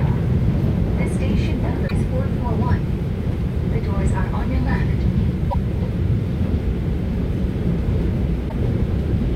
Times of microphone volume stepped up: none

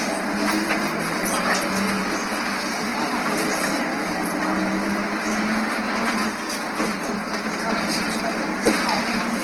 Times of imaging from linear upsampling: none

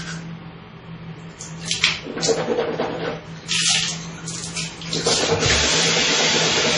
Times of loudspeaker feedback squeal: none

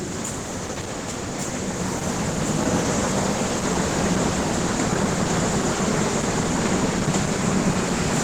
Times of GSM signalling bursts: none

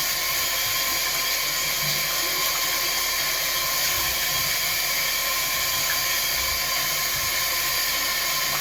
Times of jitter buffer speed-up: none

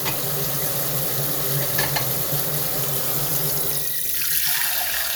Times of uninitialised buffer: none

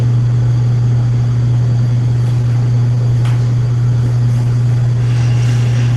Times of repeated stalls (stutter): 1.73-3.24

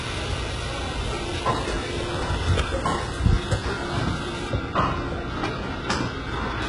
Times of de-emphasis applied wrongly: 4.49-6.62

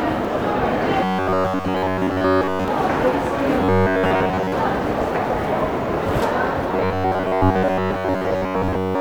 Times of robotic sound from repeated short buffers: 1.04-2.68, 3.62-4.52, 6.72-9.00

